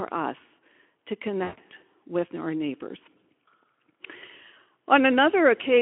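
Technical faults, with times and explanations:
1.43–1.60 s, VoIP packet loss concealed by the speech codec: after "us to", about 140 ms of speech becomes a fading extrapolation of the last pitch, with the voice staying weak or distorted for tens of milliseconds after packets return.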